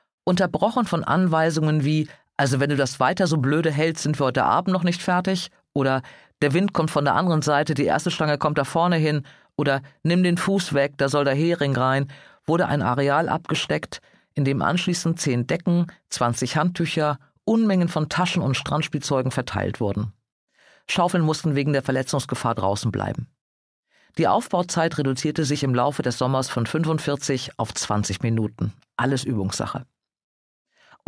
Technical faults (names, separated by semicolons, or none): none